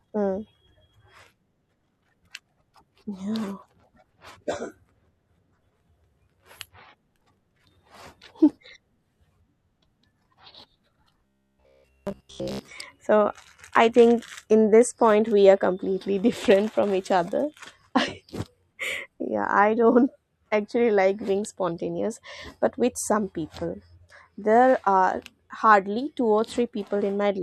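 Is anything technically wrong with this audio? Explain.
Yes. From 11.26 to 12.71 s the speech turns into a rigid, metallic buzz at 66.8 Hz that only loosely follows the words. This is robotic sound from repeated short buffers. The likely cause is audio arriving too seldom, so a roughly 15 ms buffer is replayed for most of that stretch while the real audio is skipped.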